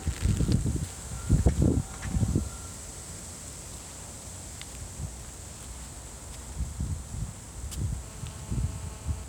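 A nearby 2G phone transmitting in bursts causes GSM phone buzz from 8.03 to 9.24 s: the audio circuit rectifies the 217 Hz radio pulses, producing a steady, raspy, harmonic-rich buzz about 22 dB below the sound.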